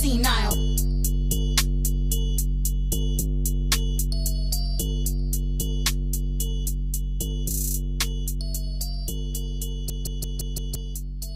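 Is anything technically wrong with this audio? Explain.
Yes. A system hang loop runs from 9.90 to 10.75 s. The playback system stalled, but the sound hardware kept replaying the same stretch of its ring buffer. A 171 ms fragment, which fits an 8192-sample buffer, repeats exactly five times at about 5.9 Hz, producing a hard, mechanical machine-gun stutter rather than a buzz. When normal playback resumes, roughly a second of the original audio is missing.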